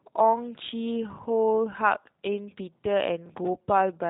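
G.729 codec damage runs through the whole speech recording. The codec rebuilds each 10 ms frame from a vocal tract filter, a pitch estimate and a handful of pulses rather than keeping the waveform, so the voice comes across as slightly rough and synthetic. Its narrow band leaves nothing above 3.8 kHz, which dulls consonants. The plainly audible damage fits the 8 kbit/s G.729A variant.

Processor overload crackle appears from 3.26 to 3.47 s, a gritty tearing laid over the speech for about a fifth of a second. The processor fell behind and kept missing its deadlines, and each time it held a stale piece of old audio whose hard edges click against what follows. The texture points to buffers of around 5 ms, with roughly seven misses in a row, before the load eased and the crackle stopped.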